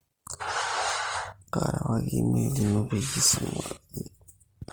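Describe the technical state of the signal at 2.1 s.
Opus compression affects 2.1 s and the whole clip: the speech turns grainy and rough as band detail becomes noise fill, likely from 24 kbps music-mode encoding.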